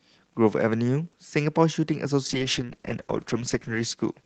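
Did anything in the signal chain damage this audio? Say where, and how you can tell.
Yes. A call bitrate drop in the codec stage starts at 2.27 s and runs to the end. Coding turns coarse and rough, consistent with Opus falling from about 32 kbps toward 9 kbps, bottoming out for 1.41 s as the bandwidth estimate collapsed.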